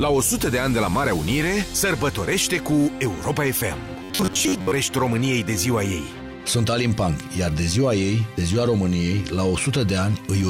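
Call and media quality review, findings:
Robotic sound from repeated short buffers, 4.03–4.73 s: rigid metallic buzz near 94 Hz, about half the audio replaced. Likely jitter-buffer underrun repeating roughly 10.7 ms segments.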